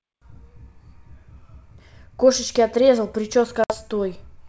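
At 3.64 to 3.74 s, packet loss on an ADPCM call cuts a hard-edged 60 ms silent hole. Unlike a plain dropout, the decoder's predictor then briefly mis-tracks before settling.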